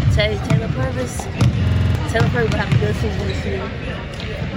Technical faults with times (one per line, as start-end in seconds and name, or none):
1.67-1.95 system hang loop